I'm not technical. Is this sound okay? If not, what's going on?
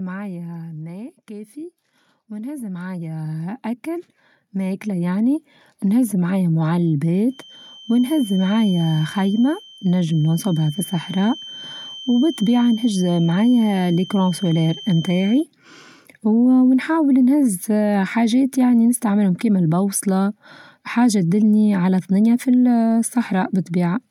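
No, there are three problems in this speech.

From 0.05 to 1.19 s there is automatic gain falling. The recorder's automatic level control decided the sound was too loud, or its background too noisy. So it turned itself down, gradually, over about a second. You hear the voice start loud and then sink. The background sinks with it. That shared drop is the sign. The speaker didn't get quieter; the machine turned the volume down.

From 1.27 to 6.1 s comes automatic gain rising. Now the level control swings the other way. It judged the sound too quiet and turned itself up. This rise is large and slow, spread over almost five seconds. Voice and background swell together. The room noise grows along with the speech. That is how you can tell the device is changing the volume, not the person.

From 7.25 to 15.47 s there is a feedback whistle. It is a thin, steady, high tone at about 3.1 kHz. It sits well below the voice, so it is faint. 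It swells and fades slowly in loudness. The likely cause is a loudspeaker feeding back into the microphone. The loop is right on the edge of howling. It doesn't build into a full squeal. It just keeps whistling in the background.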